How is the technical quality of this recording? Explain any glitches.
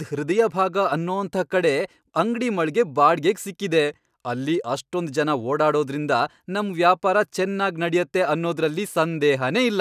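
No technical faults can be heard in this speech recording. There are no glitches to explain.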